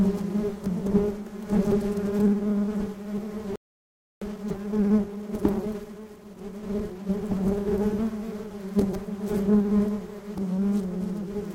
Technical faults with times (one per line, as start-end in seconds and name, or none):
3.56-4.22 playback stall
4.22-7.22 time-compressed catch-up